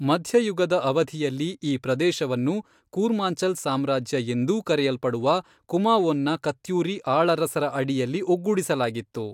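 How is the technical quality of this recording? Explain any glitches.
No technical faults or glitches can be heard anywhere in the recording.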